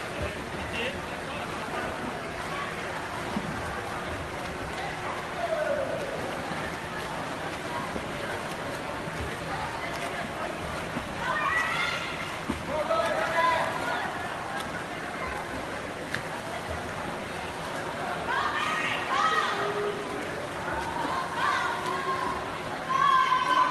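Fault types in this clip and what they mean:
No faults detected here.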